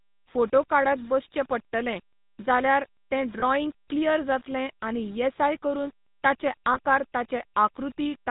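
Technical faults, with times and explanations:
Throughout: low bit depth without dither. The quieter parts of the speech take on a grainy, gritty texture that shifts with the signal, and the softest passages sputter between a couple of levels rather than fading smoothly. This pattern is likely caused by the audio being rounded to around 7 bits with no dither applied, so the quantisation error tracks the waveform instead of forming a steady hiss. The error sits roughly 30 dB below the signal.
Throughout: GSM full-rate codec. The speech has the buzzy, gravelly roughness typical of first-generation GSM coding at 13 kbps, and the damage is plainly audible. Nothing is reproduced above 4 kHz, which leaves sibilants dull and the overall sound narrow. The codec models the vocal tract with a short filter and drives it from a regularly spaced pulse excitation that keeps only one sample in three, and this produces the coarse, grating timbre.
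3.40 s and 6.74 s: lost GSM frames. Two brief metallic, ringing holds interrupt the speech. The first comes just after "बसचे पडटलें जाल्यार तें" and before "क्लियर जातलें आनी येसाय". The second follows "आनी येसाय करून ताचे". Each gap matches one missing 20 ms frame. The decoder fills the hole by reusing the previous frame's parameters, so the preceding sound is briefly frozen into a rough ring instead of a silent dropout.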